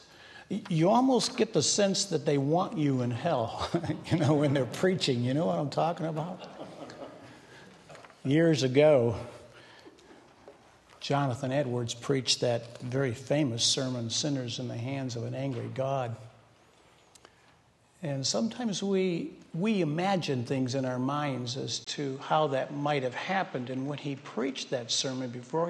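From 21.85 s, a 20 ms gap, then nothing above 8.6 kHz plus a new faint noise floor: likely an input switched to a poorer device, not mere filtering.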